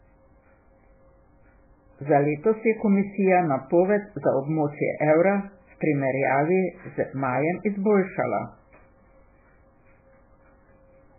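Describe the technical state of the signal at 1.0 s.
At 1.0 s, as throughout the clip, the speech likely passed through starved MP3 compression, pointing to a very low bitrate: nothing remains above 2.5 kHz, and heavy watery, swirling artefacts smear it.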